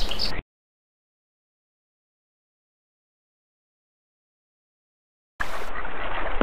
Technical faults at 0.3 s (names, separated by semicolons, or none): Bluetooth SBC bit pool drop